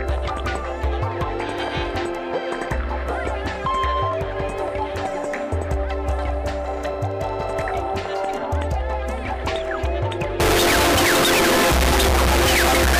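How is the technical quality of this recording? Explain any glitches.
The recording has one serious fault in its last seconds. From 10.4 s to the end, the audio turns into a loud, harsh, buzzing version of itself, with background noise as loud as the main sound. This is float read as integer, likely from 32-bit floating-point samples being interpreted as 32-bit integers, so each sample's sign and exponent bits dominate its value. The waveform becomes a nearly square block at an almost fixed, high level, and the spectrogram shows dense broadband energy with the original pitch contour still traceable.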